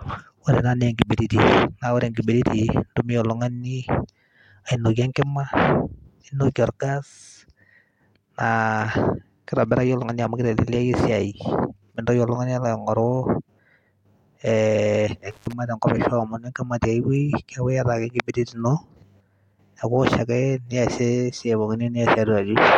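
At 15.31 s the speech drops out in an intermittent contact fault that runs to 15.53 s. A loose connection in the signal path, such as a cable or plug, briefly loses contact, and the circuit stays open for about 99 ms within that span. Crackle marks the moments the contact breaks and remakes, and while the line is open the speech vanishes, leaving only faint hiss until the connection recovers.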